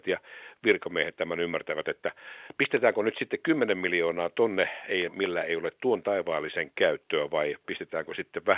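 Speech over a mu-law telephone channel at 8 kHz sampling, band-limited to 4 kHz as that coding dictates, with no technical faults to report.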